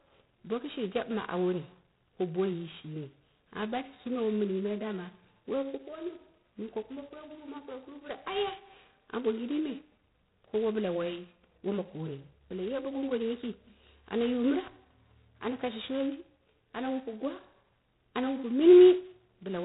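Throughout, G.726 ADPCM, coarse enough to fit 16 kbit/s, adds a rasping hiss that tracks the speech level. The spectrogram is empty above 3.9 kHz.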